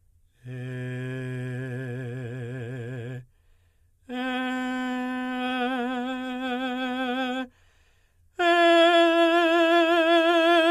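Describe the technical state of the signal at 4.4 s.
At 4.4 s the music plays through intact, with no fault present at that point.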